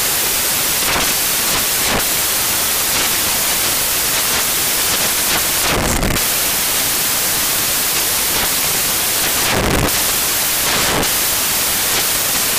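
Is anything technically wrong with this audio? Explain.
Yes, the whole clip has samples built from the wrong bytes, start to finish. The reader is assembling each sample incorrectly: off by a byte, swapped byte order, or a misread alignment. That promotes the jittery low-order bits into the big part of every value. What you get is loud, harsh broadband noise, close to white on the loud passages.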